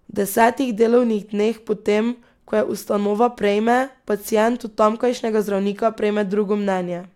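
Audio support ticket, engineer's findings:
Speech clip. Single sharp click at 0.41 s, just before "delovnih dneh po tem". Dropped samples: a handful of samples, well under a millisecond, missing from the stream. The waveform jumps abruptly from one value to a later one. No audible content lost. Spectrogram shows one thin vertical line spanning the full band at 0.41 s. Likely cause: a brief buffer or transport glitch in the capture or playback path.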